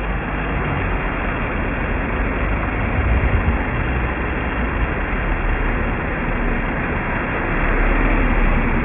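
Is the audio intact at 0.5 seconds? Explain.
No, not at 0.5 s. Aliasing runs through the whole clip. The sound seems to have been resampled to around 6 kHz without a low-pass, so anything above 3 kHz folds back as fairly loud, wrong, gritty tones crowding right up to the band edge.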